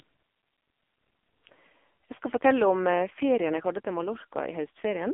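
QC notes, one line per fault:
Throughout: AMR narrowband mobile codec. The whole clip sounds like it came down a phone line, with nothing below about 250 Hz and nothing above about 3.5 kHz. The speech has that buzzy, synthetic edge you get when the codec rebuilds the voice from a vocal-tract model fed by a few pulses per 5 ms slice. Damage is heavy, which points to one of the lowest AMR-NB modes, around 5.9 kbps.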